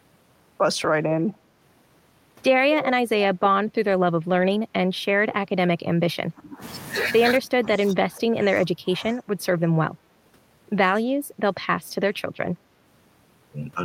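Speech recording with two echo-control faults. The first is an echo leak, most likely from a far end on a loudspeaker whose echo canceller failed to remove everything its microphone picked up and sent the remainder back. From 1.21 to 1.34 s a faint delayed copy of the speech appears, trailing by 217 ms and sitting about 30 dB below the direct sound. The second fault is speech suppressed in double talk, likely because the canceller could not tell this talker apart from loudspeaker echo while both sides spoke, so it turned the talker down too. The level dips at 4.18 to 4.26 s (about 10 dB), 5.66 to 6.62 s (about 25 dB, most of that stretch), 7.39 to 9.2 s (about 20 dB across roughly two seconds), 9.4 to 9.45 s (a slight dip of about 5 dB) and 9.7 to 9.79 s (about 10 dB), leaving the speech muffled or partly missing in those spots.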